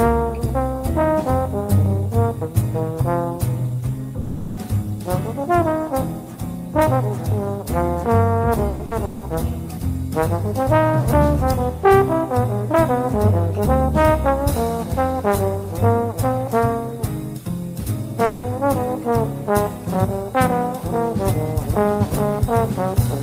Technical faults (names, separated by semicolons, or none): long network dropout; repeated packet loss (robotic sound)